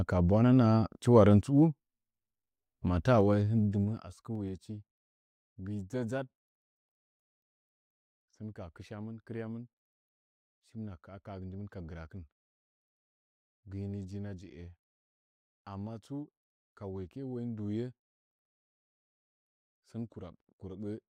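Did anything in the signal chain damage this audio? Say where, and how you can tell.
Yes. From 3.14 to 4.53 s a fast ticking, zipping texture rides on the speech as the level drops by roughly 15 dB. This is zipper noise from a gain stage in the buffer processing, stepping in unsmoothed 2 dB jumps about seven times a second, each jump clicking.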